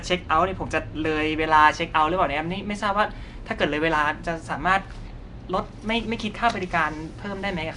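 Across the whole clip the speech carries a rough, hissy halo and a smeared, underwater texture, and nothing is heard above about 10.6 kHz. This is likely Nellymoser compression, the Nellymoser Asao codec once used for Flash microphone audio. It spends a fixed, small bit budget on short blocks, so the weaker frequency bands get no bits at all and are refilled with noise. That noise is the hiss heard wrapped around the speech, and the damage is plainly audible, in line with a bitrate around 44 kbps.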